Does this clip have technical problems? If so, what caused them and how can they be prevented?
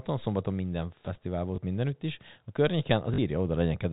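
Yes. There is packet loss with the last packet repeated, at 1.56–1.58 s, just before "mindenütt is a", and at 3.14–3.18 s. The receiver replayed the previous 20 ms of audio to fill each gap, and the 40 ms gap gives a brief robotic stutter at a 50 Hz packet rate. Jitter buffering, forward error correction or proper packet loss concealment would prevent this. The G.711 telephone coding itself is audible only as the 4 kHz band limit and a faint quantisation noise.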